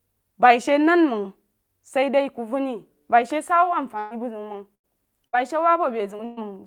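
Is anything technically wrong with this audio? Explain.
Yes. Four times the speech turns into a held buzz or fading hiss before jumping ahead: at 3.99 to 4.13 s, 4.75 to 4.86 s, 5.28 to 5.35 s and 6.25 to 6.39 s. This is a burst of packet loss. Between about 60 and 120 ms went missing each time, and the receiver stretched and faded the last sound across the gap.

At 6.17 to 6.21 s there is a brief smear, just before the last burst. This is short concealed packet loss: about 20 ms arrived too late, and the decoder briefly continued the preceding sound before blending back into the real speech.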